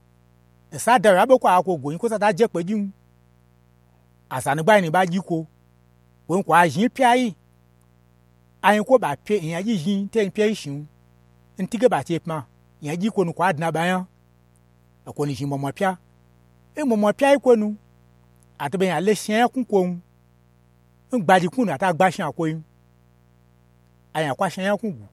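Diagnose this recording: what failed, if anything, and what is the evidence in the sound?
The analogue wiring let mains interference in, likely through a dimmer, rectifier or broken shield, with switching spikes at 120 per second. A steady, raspy 60 Hz mains buzz, roughly 35 dB below the speech, runs under the whole recording, its harmonics reaching into the kilohertz range.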